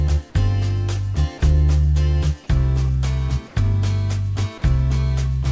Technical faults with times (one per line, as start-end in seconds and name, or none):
3.48-3.56 comfort noise in place of the background